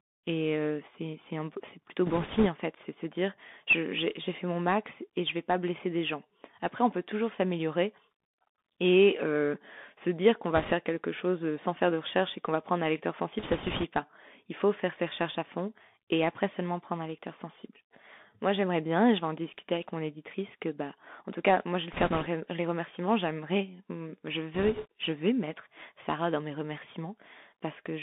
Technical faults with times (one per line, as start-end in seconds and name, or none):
0.00-28.02 Bluetooth CVSD headset codec
2.06-2.47 bit errors on a Bluetooth voice link
10.56-10.73 bit errors on a Bluetooth voice link
13.39-13.85 bit errors on a Bluetooth voice link
21.93-22.28 bit errors on a Bluetooth voice link
24.54-24.86 bit errors on a Bluetooth voice link